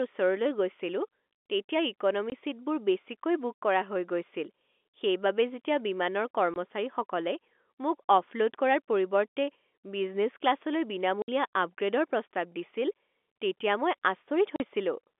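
Speech heard over a G.711 telephone line, passing roughly 250 Hz to 3.5 kHz. Packet loss filled with silence punches hard-edged holes into it. They fall at 2.30–2.32 s, after "গৈছিলো তেতিয়া", and at 6.54–6.56 s, after "যেতিয়া বিমানৰ". Two more come at 11.22–11.28 s and 14.56–14.60 s. The gaps last 20, 20, 60 and 40 ms. Every gap is a multiple of 20 ms, which points to lost 20 ms packets that the receiver replaced with silence.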